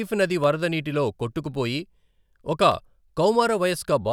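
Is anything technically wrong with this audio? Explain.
Yes. Two sharp, isolated clicks break into the speech, one at 0.44 s, just before "వరద నీటిలో", and another at 2.72 s. The likely cause is dropped samples: a tiny fraction of a millisecond of the stream went missing, so the waveform jumps abruptly to a later value. Each jump produces a single click without removing any audible sound.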